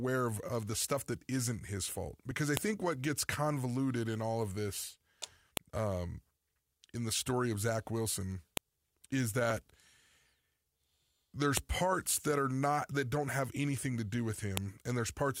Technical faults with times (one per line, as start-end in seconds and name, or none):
2.57 file header played as audio
5.57 file header played as audio
8.57 file header played as audio
11.57 file header played as audio
14.57 file header played as audio